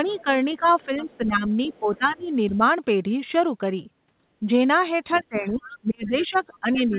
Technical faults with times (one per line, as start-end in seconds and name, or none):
0.00-2.64 speech suppressed in double talk
0.07-0.23 other side's voice leaking through
0.65-1.17 other side's voice leaking through
1.67-1.97 other side's voice leaking through
4.47-6.98 speech suppressed in double talk
5.13-6.98 other side's voice leaking through